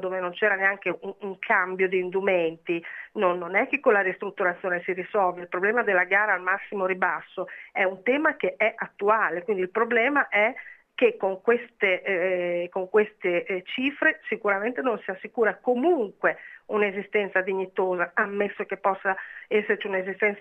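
No faults detected anywhere in the clip.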